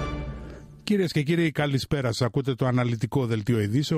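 No technical faults can be heard anywhere in this recording.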